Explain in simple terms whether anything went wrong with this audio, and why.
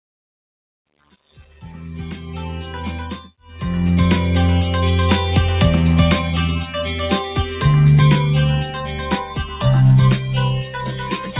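Something did go wrong. A noise suppressor applied to music or sounds was left running, though it is built for speech. It mistakes held tones and fading tails for noise. So the level keeps dipping and recovering, and the sound pumps and thins.

Sound cut by the noise suppressor shows up in six places: 0.87 to 1.62 s, 3.29 to 3.52 s, 7.29 to 7.64 s, 8.65 to 9.65 s, 10.18 to 10.35 s, and from 10.59 s to the end. Steady parts sink there. The first two dips are the deepest.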